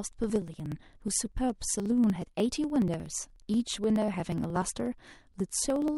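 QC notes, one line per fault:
0.06–5.88 s: periodic USB or driver dropouts. Something stalls the USB bus or audio driver every 60 ms, and each stall skips a few milliseconds of audio outright, about a hundred splices in all, producing an evenly spaced ticking through the speech.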